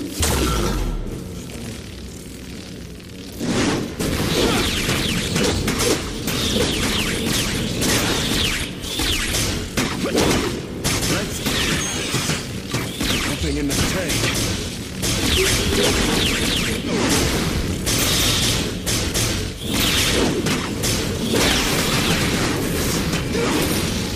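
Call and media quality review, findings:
No audible faults found in this recording.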